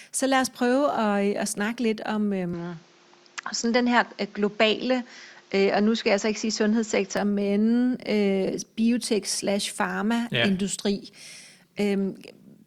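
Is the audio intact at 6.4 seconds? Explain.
No. The input switched to a poorer device from 2.53 to 7.17 s, likely a change to a narrower-band microphone. Nothing above 7.6 kHz survives, so the speech sounds duller, with a faint new noise floor, no gap, and no obvious level jump.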